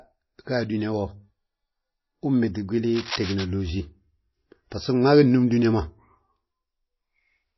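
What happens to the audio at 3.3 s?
At 3.3 s there is cable scratch noise, running from about 2.95 to 3.45 s. Dense, uneven bursts of rustling sit over the speech, roughly 10 dB below it. The likely cause is a worn cable or connector being moved, so its contact resistance jumps rapidly.

MP3 compression also shapes this moment. The speech sounds watery and swirly, and nothing remains above about 5.8 kHz. This is likely low-bitrate coding, consistent with around 24 kbps, where weak frequency lines are dropped and switch on and off between frames.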